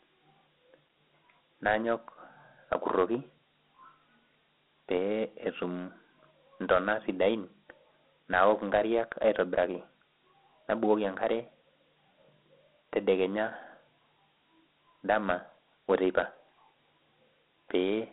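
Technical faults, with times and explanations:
Throughout: Dialogic VOX ADPCM. The speech has been squeezed through 4-bit adaptive differential coding, which fits 8 kHz sampling at 32 kbps. Each sample stores only a coarse step from the predicted value, so the quantisation error rides on the speech as a gritty hiss that rises and falls with it. The telephone-style band runs from 200 Hz to about 3.5 kHz, with nothing at all above 3.9 kHz, leaving the speech thin and muffled.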